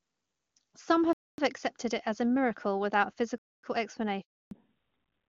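At 1.13 s and again at 3.38 s the speech breaks off for 250 ms: a gap between chunks. The pattern points to the audio being delivered in 2 s blocks with dead air inserted at each join rather than played back to back. Nothing is removed, only pushed later, so the first hole ends right before "accepted it as a" and the second begins just after "as a miracle without". Both sound like clean, identical dropouts at a steady spacing.

From 4.21 s to 4.51 s there is a handover gap. The sound cuts out within a few tens of milliseconds and stays silent for 300 ms. This is consistent with the call being handed between networks while no speech frames were arriving. Unlike the chunk gaps, this one does lose material: whatever was spoken in that window is gone, not delayed.

When the audio resumes at 4.51 s, it comes back as a fallback to narrowband that lasts to the end of the clip. Before the switch, the AMR wideband (HD Voice) codec carries the speech with full upper range and little or no audible coding damage. 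After it, nothing above 4 kHz remains, which fits a drop from AMR-WB to AMR-NB at around 12.2 kbit/s. Sibilants and consonant detail lose their edge, and the speech turns duller and rougher.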